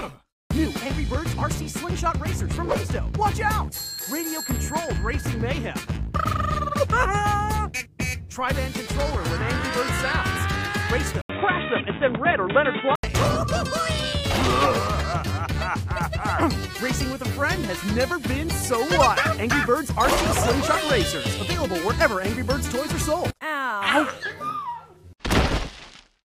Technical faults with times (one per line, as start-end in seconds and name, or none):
11.21-13.03 input switched to a poorer device